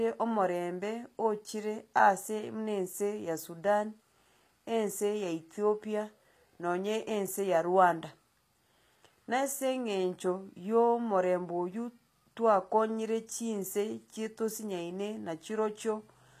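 Speech with plainly audible HE-AAC compression damage throughout: gritty, lispy s sounds, consistent with a bitrate around 24 kbps. A spectrogram shows the treble as copied, smeared blocks, cutting off sharply at 14.9 kHz.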